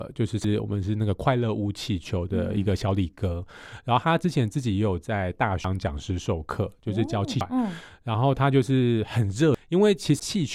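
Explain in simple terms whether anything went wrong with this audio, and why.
Speech jumps forward at 0.44, 5.64, 7.41, 9.55 and 10.20 s, losing about half a second or more each time: compressed frames skipped, chunks of roughly 93 ms missing or rejected.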